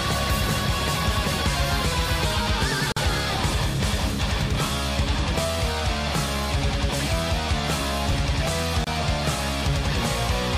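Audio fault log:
2.92 s and 8.84 s, gap at a join of encoded pieces: silences of about 46 ms and 28 ms with smeared edges. The sound then resumes exactly where it stopped, with nothing reordered.
8.11 to 8.15 s, chunks out of order: one 20 ms chunk plays one chunk late, producing a brief jumbled moment. There is no silence and nothing is lost.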